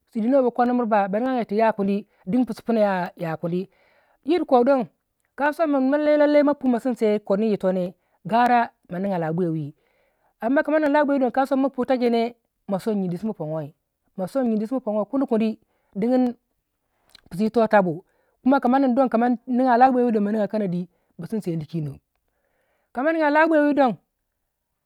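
From 0.66 s to 24.67 s, a click or tick recurs every 0.6 s, about forty in all, riding on the speech at a steady rhythm. These are likely clock drift buffer slips: two devices running on separate clocks that disagree by a few hundred parts per million, so the buffer between them creeps toward empty or full and then drops or repeats a short block of samples, on the order of a handful each time.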